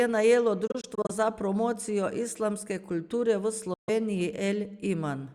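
Speech that cuts to silence in brief broken gaps from 0.67 to 1.11 s, just before "za promocijo", and again from 3.74 to 3.89 s after "kulture v". Each resumes as though it played on, likely a Bluetooth dropout.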